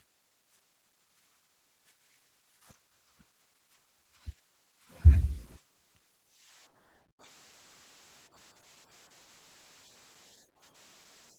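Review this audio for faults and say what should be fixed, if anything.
Opus voice compression runs throughout the clip, with the encoder starved for bits in its hybrid mode. The band below 8 kHz goes to the linear-prediction coder and the upper band to a thin transform layer, both in 20 ms frames. The excitation is coded coarsely, leaving the speech plainly hoarse and slightly robotic. That degree of damage fits a bitrate around 16 kbps. To prevent it, encode at a higher Opus bitrate, or keep the source uncompressed until final delivery.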